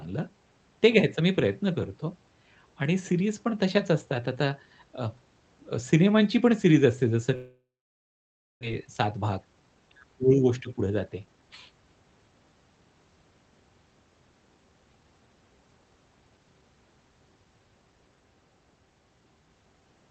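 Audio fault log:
7.35 to 8.65 s, long network dropout: the sound smears into a fading buzz, then about 0.96 s of near-silence, and it picks up again with roughly a second gone. Likely packets stopped arriving, so the receiver concealed what it could and then gave up.
8.80 to 9.75 s and 10.58 to 11.49 s, jitter buffer speed-up: speech runs about 13% then 12% fast at unchanged pitch, sounding hurried. After the gap the buffer held extra audio, so the receiver snipped out pitch-period slices, around 150 ms and 100 ms in total.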